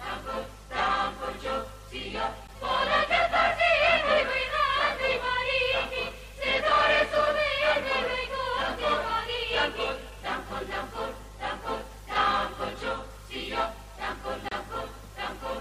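Gaps between stream segments occur at 2.47 s and from 14.49 to 14.52 s, where the audio drops to dead silence with hard edges for about 11 ms and then about 29 ms. The timestamps of adjacent segments, which fit a 6-second segment length, leave a small hole between them, and the player pads it with silence. Nothing is lost from the audio; the playback timeline simply stretches by those amounts.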